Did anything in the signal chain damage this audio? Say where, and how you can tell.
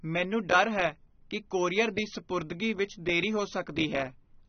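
Yes: AAC compression at the codec stage, throughout. Speech is dull with nothing above 6.4 kHz, which fits AAC-LC at around 24 kbps likely cutting the upper bands.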